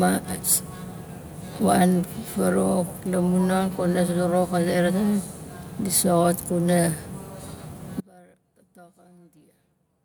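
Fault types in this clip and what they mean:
Audio dropout to a faint residue: At about 8.0 s the speech cuts out abruptly and stays out to the end. What remains is a faint trace of it, roughly 30 dB down. This is likely a broken feed with the path still live, not a pause or fade.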